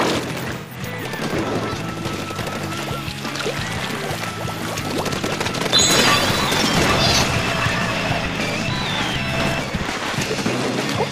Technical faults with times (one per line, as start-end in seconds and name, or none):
0.56-0.76 AAC frame loss with concealment
4.32-4.38 AAC frame loss with concealment
6.18-10.45 block size mismatch (truncated)